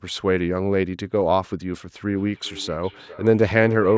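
From 2.07 s to the end, speech recurs as thin, ringing repeats roughly every 0.4 s, about 15 dB down. This is feedback echo between two devices, each recapturing the other's playback.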